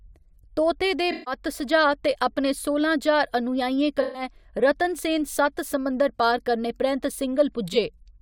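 At 1.12 to 1.34 s, between "तोते दे" and "सुझाऽ ते अपने सोलां", and again at 4.01 to 4.22 s, just before "रतनसेन सत्त समुंदर", AAC frame loss with concealment leaves smeared, noisy patches. The decoder rebuilds the missing frames from the last good spectrum, and the gaps of about 0.15 s and 0.13 s fit a run of several lost frames. A brief blip follows at 7.72 to 7.76 s. On a spectrogram each patch shows blurred, flattened harmonics, and the waveform loses its normal envelope shape.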